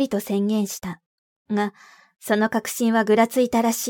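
Listening to the speech closely, nothing stood out as a technical fault at any point.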